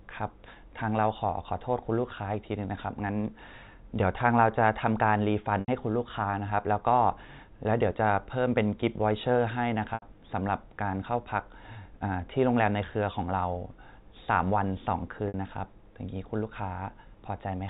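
Speech over a G.711 telephone path, band-limited to 4 kHz, is broken three times by packet loss with pitch repetition. Gaps occur at 5.60 s and 9.94 s, each about 80 ms long, and at 15.28 s, about 60 ms. In each, the receiver loops the last pitch period and fades it out. This gives a brief held, buzzy tone before speech resumes. The lengths fit runs of four, four and three 20 ms packets.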